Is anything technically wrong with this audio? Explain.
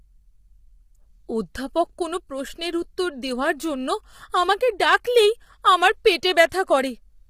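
Yes. Throughout the speech, low-delay AAC compression is audible: the voice sounds rough and grainy, with noise filling the gaps between harmonics and a thin, synthetic top band. Short frames resolve pitch harmonics poorly, and heavy damage likely points to AAC-ELD at about 24 kbps.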